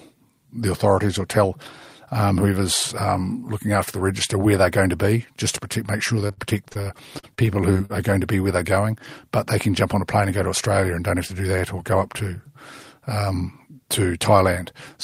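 From 6.27 s to 7.92 s, after "to protect make sure" and before "are going to be", the speech breaks up with repeated packet loss, giving a robotic sound. About a dozen short holes appear in quick succession. The longest lasts 62 ms. Each hole is patched by stretching the last bit of sound, about 343 ms of filler in all, roughly a fifth of the stretch. Another 240 ms is simply missing. The result is choppy, with pieces missing.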